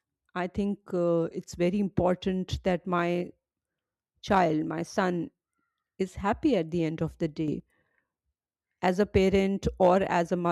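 A gain change was most likely applied without a ramp, switching the digital level from one sample to the next, and in this speech recording it shows up as a sudden gain jump between 7.48 and 7.6 s. The level steps up by about 7 dB at once, and the voice and the background noise rise together, so the floor audibly lifts along with the speech instead of the talker simply growing louder.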